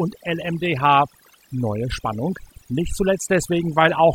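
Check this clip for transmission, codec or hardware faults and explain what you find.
One processing fault runs through the whole speech clip. Overdone noise removal: an over-aggressive noise reducer drives bands near its noise estimate to silence, leaving twinkling specks in the background and taking quiet parts of the voice with them.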